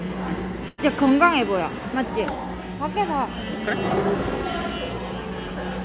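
At 0.68 s there's a burst of packet loss: for about 100 ms the receiver stretches and fades the last sound, then jumps ahead to 0.80 s, with everything above 4 kHz gone, which fits a narrowband G.711 call path.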